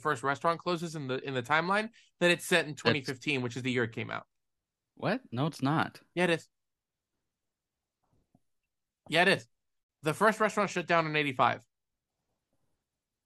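A speech clip with one gap at a join of encoded pieces. Right after "it is", the sound drops out from 9.84 to 9.89 s, a silence of about 59 ms. Its edges are smeared by the codec. The speech then resumes where it stopped. The audio was encoded in separate pieces, about 10 s long, and joined untrimmed. Each piece keeps its encoder's start-up silence and the padding of its final frame.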